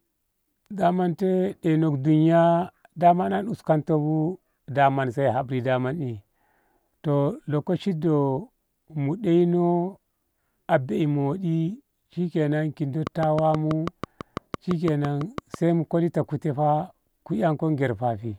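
From 13.07 to 15.55 s, a train of clicks sits over the speech. The clicks arrive at a steady rate of about 6.1 per second, evenly spaced, with about fifteen in all. Each has much the same sharp shape. They peak roughly 10 dB above the speech, so they stand out clearly as a regular ticking. The train stops just before "mu kolan". The likely cause is interference from nearby equipment or a faulty connection or power supply injecting repeated pulses.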